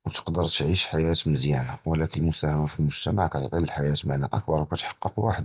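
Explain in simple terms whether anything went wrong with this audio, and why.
Nothing went wrong here.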